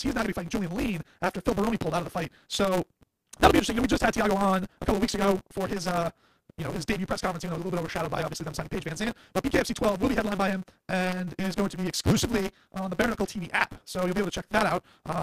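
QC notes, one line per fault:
Throughout: block size mismatch (truncated). The speech runs about 1.88 times fast at near-normal pitch, under a steady 188 Hz buzz. The write blocks are longer than the reads, which fits a 256-sample read block, so each block's tail is discarded and the joins between blocks break at that rate.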